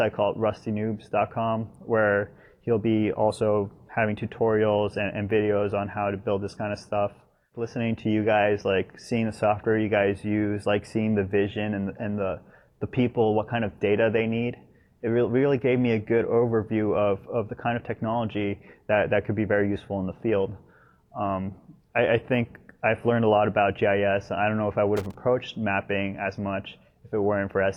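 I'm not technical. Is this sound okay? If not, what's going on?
No. From 24.97 to 25.15 seconds there is loose connector crackle: a worn or dirty plug contact briefly flickering on and off, chopping the sound into an irregular scratchy burst. A digital glitch would be a single clean tick; this is ragged and uneven.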